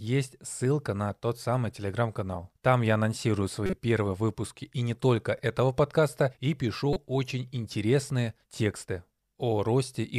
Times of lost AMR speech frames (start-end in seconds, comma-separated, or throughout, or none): none